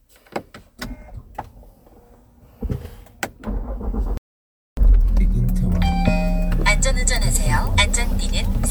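A recording of everyday sounds with two faults. At 4.17 s the audio cuts to silence in mid-flow. It stays silent until 4.77 s, about 0.6 s. This playback stall likely comes from the player running short of data or its thread being blocked. From 4.77 s to 5.35 s a time-compressed catch-up follows. The player works off its backlog by dropping small slices and cross-fading the joins. The sound runs at twice normal speed. Pitch stays the same.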